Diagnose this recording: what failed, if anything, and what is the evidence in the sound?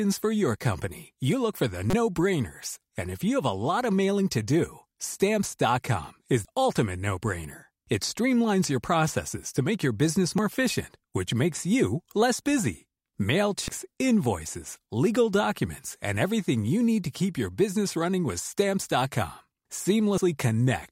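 Codec stage: damaged data in the compressed stream gives brief glitches at 1.90–1.94, 6.45, 10.38, 13.68 and 20.18 s as the decoder loses frame sync.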